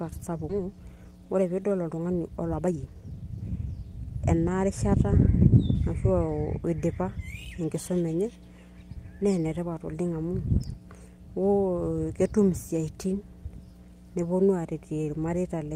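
A steady 60 Hz mains hum sits under the speech for the whole clip at about 20 dB below the signal. The low tone with some low harmonics points to a ground loop or nearby transformer coupling the power line into the signal path.

At 0.49 s a skip ahead occurs. Roughly a second of speech is discarded, likely by an overflowing jitter buffer, and playback jumps forward with no fill. The two sides of the cut are butted together almost seamlessly, so material simply vanishes.

From 0.59 to 3.73 s a jitter buffer speed-up follows. The receiver trims short pitch-period segments repeatedly to drain excess buffered audio, removing about half a second in total. Speech runs at about 117% speed with unchanged pitch, sounding hurried.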